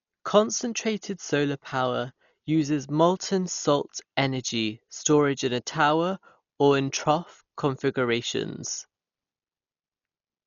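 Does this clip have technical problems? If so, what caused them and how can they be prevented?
Yes. Throughout the speech, nothing reaches above 7 kHz, so it sounds dull. Rough, fluttering noise hangs around tones. This is likely heavy Dolby Digital compression, which fits a 40 kbps encode that starves many frequency lines and fills them with noise. Prevent it by encoding at a higher bitrate.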